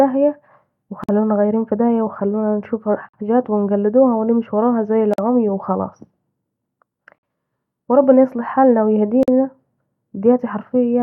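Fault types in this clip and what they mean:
gap at a join of encoded pieces: separately encoded pieces were joined untrimmed, keeping each run's start delay and end padding, so a 48 to 50 ms silence breaks the speech every 2 s, at 1.04, 3.09, 5.14, 7.18 and 9.23 s.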